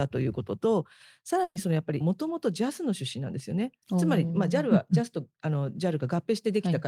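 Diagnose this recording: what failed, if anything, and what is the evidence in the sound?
Network stage: a burst of packet loss at 1.43–1.58 s. About 120 ms is concealed by continuing the last sound and fading it, then silence; spectrogram shows smeared, decaying energy before a blank gap.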